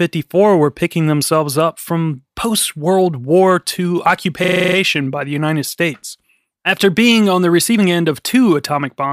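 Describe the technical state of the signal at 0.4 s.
At 0.4 s the speech signal is intact, with no audible fault at that moment.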